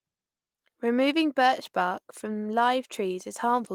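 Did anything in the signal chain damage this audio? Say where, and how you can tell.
No, nothing in the signal chain damaged this audio.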